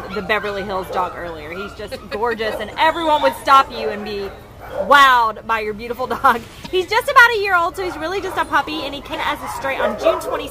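At 6.63 s and again at 9.11 s, each lasting about 40 ms, damaged data in the compressed stream makes the decoder misread frames and lose sync while it hunts for the next valid frame header, producing a short chirp or blip.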